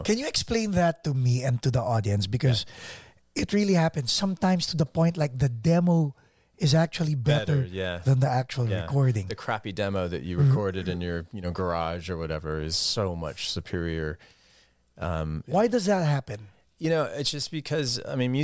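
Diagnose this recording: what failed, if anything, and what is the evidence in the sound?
Nothing in this speech recording points to a failure at any stage of the chain. No moment in the audio gives evidence of a fault that needs diagnosing.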